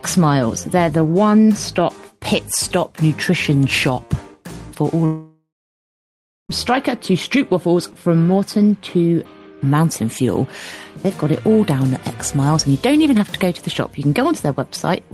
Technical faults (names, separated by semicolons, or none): long network dropout